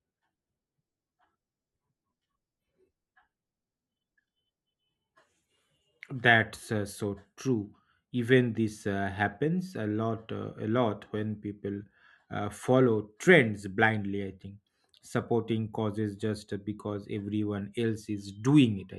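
No technical faults occur at any point in the recording, so there is nothing to place in time order.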